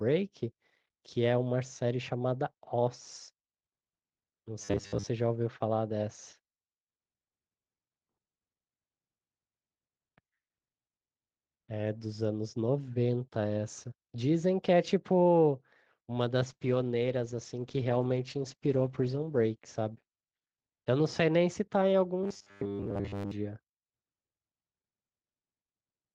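Robotic sound from repeated short buffers hits this speech recording at 4.62 to 5.08 s and again at 22.23 to 23.31 s, turning it into a rigid metallic buzz at 100 Hz. The likely cause is late-arriving audio patched by repeating the last 10 ms over and over, replacing most of the real signal during those stretches. A call bitrate drop runs from 16.51 to 20.90 s. The sound turns coarse and watery, and the top end falls from 12 kHz to 8 kHz, which fits the Opus encoder being cut from about 32 kbps to about 12 kbps. It stays at its worst for about 2.6 s before recovering.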